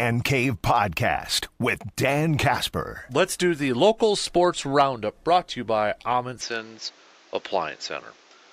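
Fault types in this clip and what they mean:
Input switched to a poorer device: from 6.41 s to the end, the speech abruptly loses all content above 7.6 kHz and turns duller, with a modest level shift, a new faint noise floor, and no gap at the change. A mid-recording input change is the likely cause.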